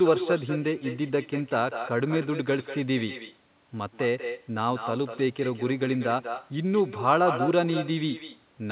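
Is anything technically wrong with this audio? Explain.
Yes. There is echo with no canceller running through the whole speech clip. The far end plays the call over a loudspeaker, its microphone picks that playback up, and nothing strips it out, so the speech returns after the network round trip. Every phrase is trailed, roughly a fifth of a second later, by a copy about 8 dB quieter and thin, heard through the same narrowband path cut off at 4 kHz that points to a telephone codec such as G.711.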